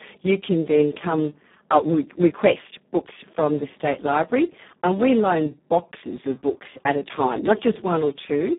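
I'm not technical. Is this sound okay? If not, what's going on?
No. From start to finish the speech was squeezed hard by the Speex codec, an old voice-chat compressor, leaving it hoarse, noisy and phone-like, with no crisp highs.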